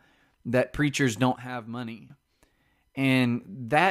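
Right after "that preachers", at 1.36 s, the level drops suddenly by about 11 dB and stays down until 2.10 s. The speech and the background noise fall together. This is a sudden gain jump, likely a gain setting applied at once without a ramp.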